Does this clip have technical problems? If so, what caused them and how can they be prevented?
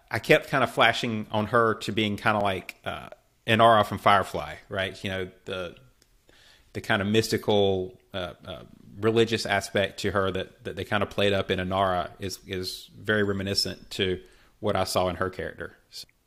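Yes. Overlap between stream segments: timestamps of adjacent 2-second segments overlap, and the player trims real speech it treats as duplicated. At 0.42, 2.41–2.43, 4.40, 6.39, 10.35, 12.33 and 14.32 s, 6 to 20 milliseconds vanish, leaving a click or tiny skip. Segment timestamps should be generated contiguously, with no overlap at segment boundaries.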